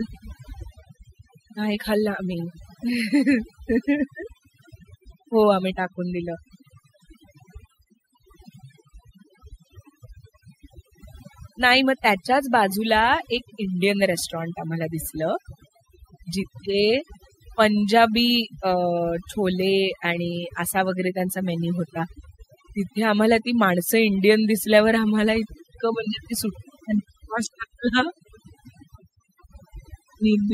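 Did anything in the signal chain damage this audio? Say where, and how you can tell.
Yes. Throughout the speech, the background collapses into near silence dotted with twinkling specks. That is overdone noise removal at the processing stage: an over-aggressive suppressor cuts individual frequency bands near its noise estimate, stripping quieter voice detail along with the noise.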